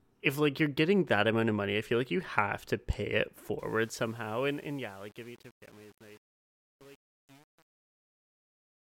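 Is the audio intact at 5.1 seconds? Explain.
No. From 3.59 s, after "have to pay it", to 8.97 s, the fade-out shows truncation distortion. Too few bits, around 8, without dither make it gritty rather than smoothly receding.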